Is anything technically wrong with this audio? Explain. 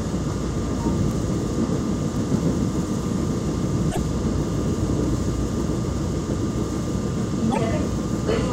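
Yes, there are two kinds of fault, each happening twice.

There's a bit error spike at 1.11 s and another at 2.16 s. Each is a single sample where one bit got flipped, either in memory or on a digital link, so the value leaps by a power of two and snaps straight back. You hear a lone, sharp tick that has nothing to do with the surrounding sound and spreads right across the spectrum.

From 3.91 to 3.98 s, and again from 7.51 to 7.58 s, the audio skips forward and comes back garbled for about 70 ms. That's most likely a broken MP3 bit reservoir. Frames here borrow bytes from earlier ones, so when some frames go missing, the next one reaches back and decodes another frame's data. The stretch lasts under three frames, which fits roughly 26 ms MP3 frames.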